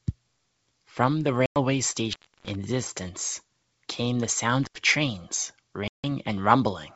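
A speech clip carried over a wideband phone line, where the G.722 coding itself adds at most a faint upper-band hiss. It has two kinds of fault. The first is packet loss on an ADPCM call. At 1.46 to 1.58 s, about 100 ms drops to silence. At 5.88 to 6.05 s, about 160 ms goes. Each gap has hard edges and spans a handful of packets. When the speech comes back, some slight distortion follows briefly. That happens because the receiver's predictor and step size were left stale by the gap. They need some tens of milliseconds to catch up with the sender. The second is intermittent contact. At 2.13 to 2.55 s, the sound cuts out for about 315 ms. At 4.64 to 4.78 s, it cuts out for about 76 ms. Crackle marks the edges of each dropout, and faint hiss fills the gap. This points to a loose plug or cable opening the circuit for a moment.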